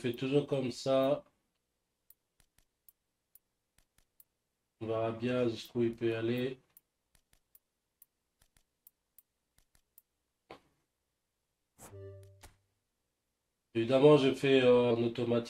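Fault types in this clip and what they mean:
Compressed frames skipped: Whole frames went unplayed. At 14.9 s the sound leaps ahead roughly a third of a second, fitting about ten frames.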